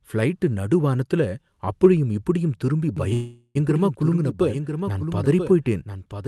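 From 2.97 s to the end there's a doubled audio track: a clean copy roughly a second behind, about 5 dB quieter, cutting in abruptly, likely from a second capture path.

At 3.13 s a call audio freeze stretches the last sound into a fading buzz or hiss until 3.57 s, likely a starved jitter buffer. The audio then resumes where it stopped, losing nothing.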